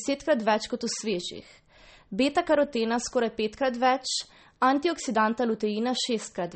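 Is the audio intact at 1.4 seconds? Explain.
No. Throughout the clip, including at 1.4 s, the speech is cut off above 8.4 kHz and weak frequency components flicker between frames, giving a watery, swirly sound that a plain low-pass filter wouldn't cause. This is likely MP3 compression at a starved bitrate, around 32 kbps.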